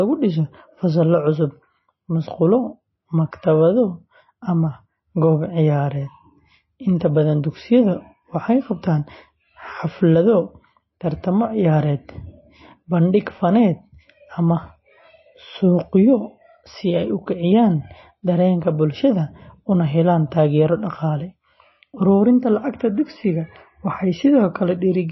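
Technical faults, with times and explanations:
Throughout, MP3 compression: watery, swirling speech with no treble above about 5.8 kHz, likely from a low bitrate that fits roughly 24 kbps, starving weak frequency bands.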